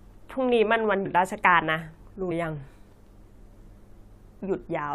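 At 1.05 s and again at 2.30 s the speech jumps ahead by roughly 70 ms, about three compressed frames skipped, which fits a 23.2 ms frame length. The decoder dropped those frames, so the audio in each gap never plays and the speech cuts straight across the join.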